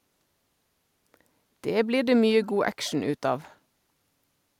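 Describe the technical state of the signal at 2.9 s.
Right around 2.9 s there's a brief echo leak, running from 2.84 to 2.92 s. You hear a faint, delayed copy of the speech, lagging about 234 ms behind and sitting far below the main signal, so it's more of a ghost than a clear repeat. The likely cause is a loudspeaker on one end whose echo canceller let a scrap of the returning audio slip through and get sent back.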